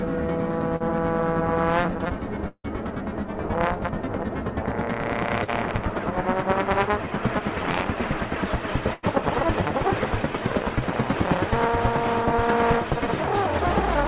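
At 0.76 to 0.82 s and again at 5.44 to 5.50 s there is short concealed packet loss. About 40 ms of audio went missing each time, and the receiver papered over it by extending the preceding sound before blending back into the real signal. It is heard as a brief smear or wobble.

At 2.48 to 2.66 s the gap is longer, about 160 ms, with a likely cause of a long network dropout. The concealment continues the last sound as a fading buzz or hiss, then about 50 ms of silence follows. The audio resumes further on, with the lost part simply absent.

At 8.94 to 9.05 s a burst of packet loss removes about 100 ms. Roughly 90 ms of that is filled by a held, decaying continuation, a buzz or fading hiss, before the audio picks up again past the missing section. Throughout, the band stops at 4 kHz, which points to G.711 mu-law at 64 kbps.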